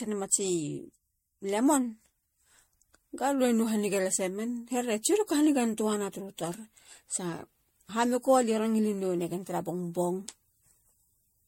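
Generation loss throughout: swirly, hollow speech with blurred attacks, likely from about five MP3 re-encodes near 64 kbit/s; the spectrogram shows holes and nothing above 16.5 kHz.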